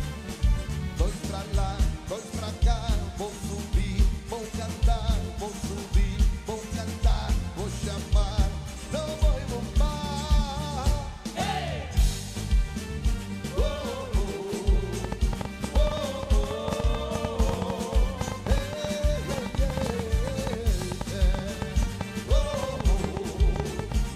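A train of clicks runs from 15.04 to 23.93 s: around seventy uneven pops, about 7 per second, well above the sound, likely from electrical interference.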